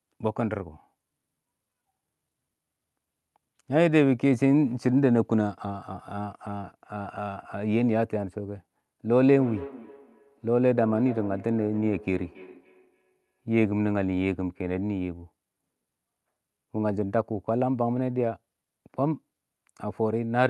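Two devices on the same call in one room create a feedback echo loop in this speech clip, from 9.31 to 13.48 s. Each phrase returns roughly every third of a second, thin and ringing, peaking about 18 dB below the speech.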